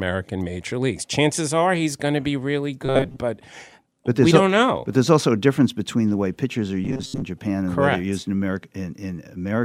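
Audio likely arriving too seldom forced repeats of a roughly 7.5 ms buffer, replacing most of the signal, from 2.86 to 3.19 s after "going to be really" and 6.85 to 7.23 s after "the way pitchers are". Both produce robotic sound from repeated short buffers, a rigid metallic 134 Hz buzz.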